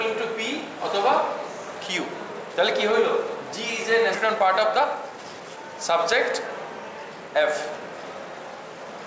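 At 4.14 to 4.16 s the sound jumps abruptly forward, with no gap or fill, so the material on either side is butted together and roughly 0.7 s of audio never plays. This is a skip ahead. Later audio had already arrived and was waiting, so the jitter buffer threw away the backlog rather than play it late. That cut the delay by about the same amount.

From 4.24 to 5.64 s the sound runs noticeably quick and hurried, about 116% of normal speed, yet the pitch stays put. This is a jitter buffer speed-up. The buffer was still holding more audio than its target, so the receiver shortened its delay by cutting out many tiny slices, each one or a few pitch periods long, in quick succession. Roughly 200 ms went this way. All of it passes through a band that stops at 8 kHz, which fits a wideband call codec.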